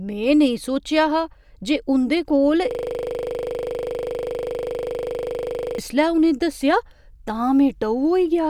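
From 2.71 to 5.78 s, a system hang loop repeats one 40 ms buffer at 25 Hz. It sounds like a buzzing stutter, and the waveform shows identical repeating blocks.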